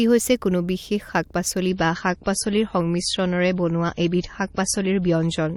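At 1.68 s the speech switches abruptly to an adaptive stream at a lower bitrate and stays there to the end. The player dropped to a leaner version of the stream, consistent with a fall from 128 kbit/s to 32 kbit/s MP3. Nothing remains above 11.5 kHz, and codec artefacts rise. Unlike a dropout there is no gap, and unlike a plain filter the degradation arrives all at once.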